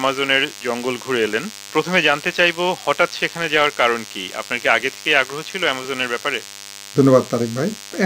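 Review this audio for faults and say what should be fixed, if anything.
DECT cordless phone buzz, present throughout: a nearby DECT handset or base transmits a radio burst every 10 ms, and the audio circuitry rectifies it, producing a thin 100 Hz buzz rich in harmonics, sitting roughly 20 dB below the signal. Keep DECT phones and bases well away from the recording chain and use shielded, balanced cabling.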